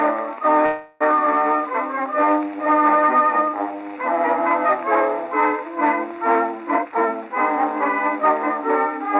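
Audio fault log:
0.66–1.02 s, call audio freeze: the music stalls into a fading smeared tail for about 0.34 s, likely a jitter buffer running dry, then resumes with nothing lost.
6.74–7.30 s, jitter buffer speed-up: the music rushes at about 142% speed, same pitch, as the buffer trims roughly 0.3 s in tiny slices, breaking the tempo.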